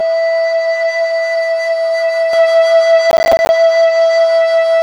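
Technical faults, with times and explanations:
0.00–2.33 s, channel delay (comb filtering): For the first couple of seconds the music sounds hollow and phasey, a bit like it's coming down a tube. One side is running roughly 5 ms behind the other, and when the two fold together to mono, whatever they share cancels at evenly spaced frequencies. The first notch sits somewhere around 100 Hz, with more stacked regularly above it, which is why the whole thing feels scooped.
3.11–3.49 s, processor overload crackle: Here there's a short burst of gritty crackle riding on the music for a bit under half a second, then it clears. That's the processor falling behind and missing a string of buffer deadlines in a row, something like fifteen of them. The gaps are filled with silence, and the dropout lengths point to buffers of around 10 ms. Each one is a tiny hard-edged gap, and packed that closely together they blur into a tearing rasp.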